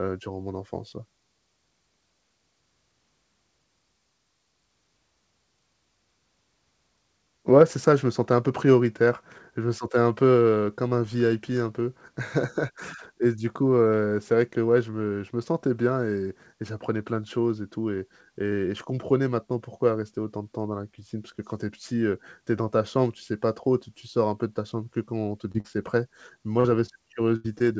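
Short concealed packet loss occurs at 25.52 s, 25.60 s, 26.60 s and 26.86 s. Each time, about 20 to 40 ms of the speech failed to arrive. The receiver patched each hole by extending the preceding sound and then blended back into the real audio, so each one is heard as a brief smear or wobble rather than a gap.

A burst of packet loss follows from 27.36 to 27.46 s. About 80 ms went missing in one run, which is too long to hide as a brief smear. The receiver stretched the last sound into a fading buzz or hiss, and the speech then jumps ahead with that stretch absent.

A final short concealed packet loss at 27.58 s covers about 20 ms. Throughout the clip, the call path leaves nothing above 8 kHz, which fits the G.722 codec.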